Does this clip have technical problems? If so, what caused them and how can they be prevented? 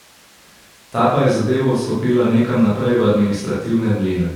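No, there are no technical faults to point to in this speech recording. With nothing going wrong here, there is no cause to trace and nothing that needs preventing.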